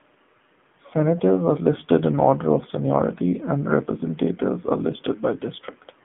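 From start to finish, the speech carries the sound of the AMR narrowband mobile codec. The line band runs from about 150 Hz to 3.5 kHz, with nothing above 3.7 kHz. A plain telephone filter would only narrow the band. Here the voice is also rebuilt from a vocal-tract model excited by sparse pulses, so it has a buzzy, synthetic edge. The codec damage is plainly audible, which fits a low mode around 7.4 kbps.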